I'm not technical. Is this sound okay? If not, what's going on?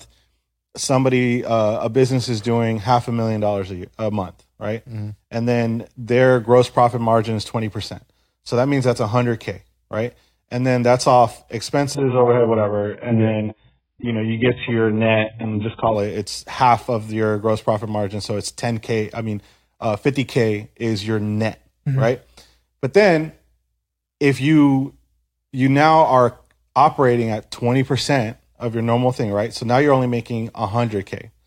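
No. From 11.95 to 15.95 s, between "then that's off" and "it it's half of", there's an adaptive stream at a lower bitrate. The connection slowed, so the player switched to a cheaper version. The voice suddenly turns dull and muffled, losing everything above 3.7 kHz, without any gap.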